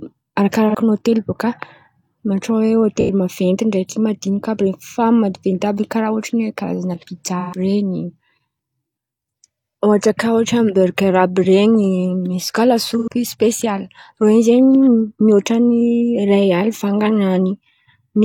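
Brief smeared, noisy, phasey patches interrupt the speech at 0.69 to 0.75 s, 3.01 to 3.10 s, 7.39 to 7.58 s and 12.98 to 13.08 s. This is AAC frame loss with concealment: the decoder rebuilt each gap of 43 to 128 ms, which fits one to three lost frames, from the last good spectrum.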